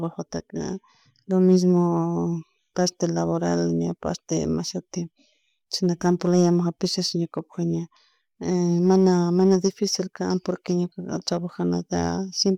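Listening to the speech recording revealed nothing technically wrong.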